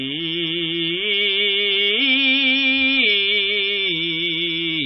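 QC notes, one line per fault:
Throughout, MP3 compression: the music sounds dull and watery, with swirling, metallic chirps and smeared attacks, and nothing above about 5.7 kHz. This is likely a starved MP3 encoder, which fits roughly 24 kbps, cutting the treble and switching weak frequency lines on and off between frames.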